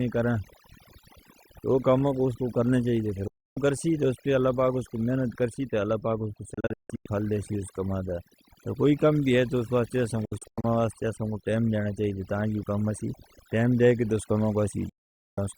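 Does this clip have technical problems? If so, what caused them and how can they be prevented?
Yes. Overdone noise removal runs through the whole clip: the noise reduction was set too aggressively, so every frequency band sitting near its noise estimate is pulled far down or switched off, and the quieter parts of the speech vanish along with the hiss. The background becomes an unnatural near-silence sprinkled with twinkling specks. To prevent it, apply gentler reduction with a modest attenuation limit, or capture a cleaner recording in the first place.

Digital broadcast dropouts occur at 3.28 to 3.57 s, 6.54 to 7.08 s, 10.25 to 10.64 s and 14.89 to 15.38 s. Each time, the receiver stopped getting usable frames and muted, fading to silence in about 3 ms. The first and last are single holes of 288 ms and 480 ms. The middle two are broken into several short gaps: 352 ms lost across 512 ms with the longest gap 160 ms, then 224 ms across 384 ms with the longest 96 ms. 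The audio is simply gone in those spans, and the gap lengths fit frames of about 32 ms each. Stronger reception, a better antenna position or added error protection would prevent these dropouts.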